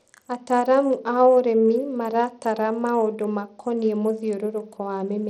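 Throughout the speech, treble flickers and a gritty, aliased edge rides on it, with nothing above 18.6 kHz, likely Bluetooth SBC compression at a starved bit pool, consistent with about 80 kbps.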